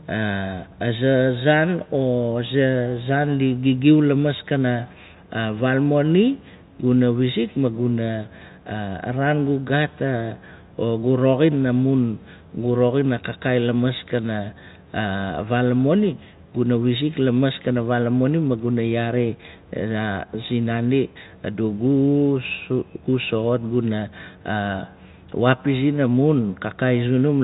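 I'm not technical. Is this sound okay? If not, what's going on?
Yes, this sound is okay.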